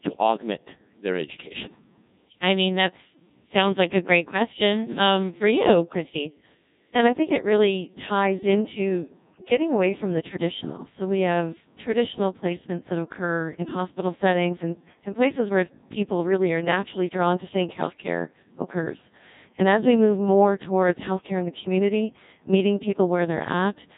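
From start to finish the speech has been through a Codec 2 vocoder, and the damage is heavy. The sound is robotic and buzzy, consistent with a rate around 1.6 kbit/s. The original waveform is discarded: the encoder transmits only pitch, voicing decisions, energy and a coarse spectral envelope, and the decoder rebuilds the voice from a bank of sine waves. Natural texture and breathiness are lost, leaving a synthetic, metallic tone throughout.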